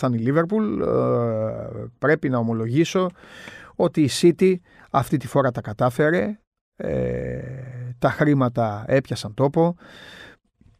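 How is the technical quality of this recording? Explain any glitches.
No technical faults are audible in this recording.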